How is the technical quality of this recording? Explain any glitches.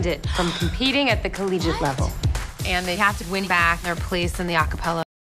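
The recording has two kinds of fault: four isolated clicks and an abrupt ending.

Dropped samples at 1.65, 2.48, 3.50 and 4.48 s: each is a single sharp click, likely from under a millisecond of audio going missing so the waveform jumps. No sound is audibly lost, unlike a dropout.

Cut-off end at 5.03 s: the sound stops mid-event and falls straight to digital silence with no decay, because the final buffers were never written. Unlike a fade, nothing tails off.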